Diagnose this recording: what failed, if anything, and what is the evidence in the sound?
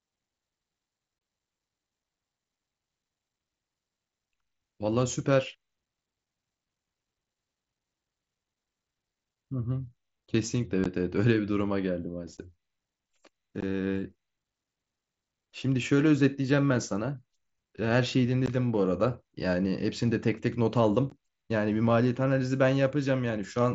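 Unconcealed Bluetooth headset packet loss on the headset link: lost mSBC frames become silence, leaving abrupt speech gaps at 1.19–1.21 s (22.5 ms), then 15 ms gaps at 10.84, 12.37, 13.61, 18.46 and 21.10 s.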